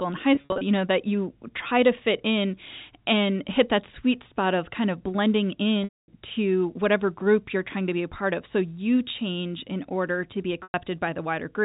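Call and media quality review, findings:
Packet loss with pitch repetition in the receiver's concealment, at 0.35–0.61 s (180 ms lost, scattered, longest run 50 ms), 5.84–6.08 s (240 ms) and 10.63–10.74 s (110 ms). The last pitch period repeats as a held buzz, then fades to silence on the longer gaps, unlike plain dropouts or clicks. The loss pattern fits 10 ms packets over intact G.711.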